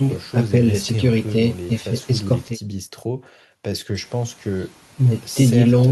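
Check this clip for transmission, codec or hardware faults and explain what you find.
No faults can be heard anywhere in this speech clip.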